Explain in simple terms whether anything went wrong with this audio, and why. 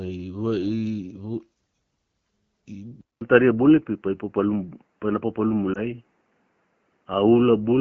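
Yes, two things go wrong. At 3.01 s there's a brief silence, then everything turns dull and boxy, with nothing above 3 kHz. That's likely an input switched to a poorer device. Later, from 5.73 to 5.81 s, a lost AMR speech frame causes a quick dip or warble while the decoder covers the gap.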